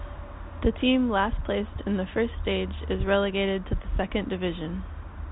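No technical faults can be heard anywhere in the speech. The audio carries the narrow band of G.711 telephone coding, with nothing above 4 kHz and only a faint level-following hiss from the 8-bit logarithmic quantisation.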